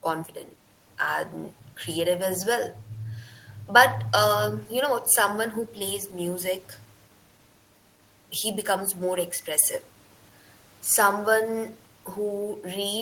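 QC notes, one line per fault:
No faults heard in the speech; nothing to log.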